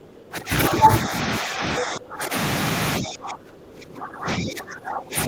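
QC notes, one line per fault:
0.00–0.29 s, other side's voice leaking through: a faint second voice sits roughly 25 dB below the talker, likely residual loudspeaker echo; the spectrogram shows weak harmonic traces.
0.29–0.52 s, 1.05–2.35 s, 2.99 s to end, speech suppressed in double talk: the talker drops roughly 15–25 dB, likely the canceller ducking during overlap; the waveform envelope collapses.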